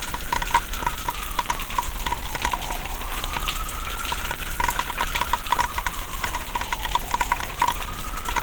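Throughout, the sound is grainy and hoarse rather than swirly like MP3, though it still extends to 20.1 kHz. This is likely Opus compression in hybrid mode, which fits about 16 kbps.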